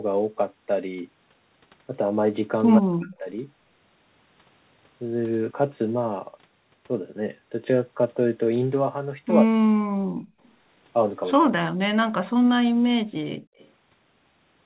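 From 2.79 to 3.25 s the speech sinks by roughly 40 dB. It happens again from 9.44 to 10.24 s and from 11.42 to 11.89 s. This is speech suppressed in double talk, and the likely cause is that the far end was talking at the same moment. The echo canceller could not tell this talker apart from its own loudspeaker echo, so it pulled the whole signal down.

At 10.43 to 10.51 s, a faint scrap of the voice trails the original by 115 ms, sitting about 40 dB under it. A second, slightly stronger scrap follows from 13.57 to 13.70 s at about 35 dB down with the same delay. This is echo leak. It likely comes from a far-end loudspeaker whose echo canceller left some residue of the returned sound uncancelled.

In between, the room sound vanishes for a moment from 12.72 to 12.83 s, dropping about 39 dB, and again from 13.35 to 13.57 s, dropping about 40 dB, then comes straight back. This is background gated by the echo canceller. 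While the loudspeaker played, the canceller clamped the microphone hard, and it released once playback stopped. All of this is heard through the G.711 call path, which keeps nothing above 4 kHz.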